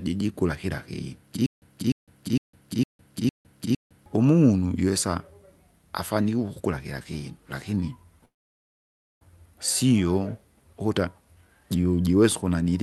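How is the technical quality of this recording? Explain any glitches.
The recording has two clear playback faults, heard over a call-codec sound whose high end stops around 12 kHz.

Stutter with silent gaps, 1.46 to 4.06 s: after "kira kinu", playback likely stalled and retried. A 0.30 s fragment replays six times, each followed by 0.16 s of dead silence, a 0.46 s cycle. Whatever should have played there is lost before "umunu jiwesa".

Call audio freeze, 8.25 to 9.23 s: after "ukukula kila kinu lakini", delayed packets likely drained the jitter buffer. The last sound is stretched into a brief fading tail, then about 0.92 s of silence. The speech resumes at "sio ukuta jujuwesa", with nothing missing, only delayed.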